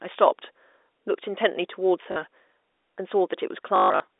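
At 2.12 to 2.16 s, and again from 3.76 to 4.0 s, packet loss with the last packet repeated occurs: audio went missing and the receiver replayed its last good piece until fresh packets arrived. The first gap is a 40 ms stutter, fitting two 20 ms packets. The second loses 200 ms scattered over 240 ms, including a 140 ms run that buzzes robotically at the packet rate, under the narrow telephone band of the G.711 line.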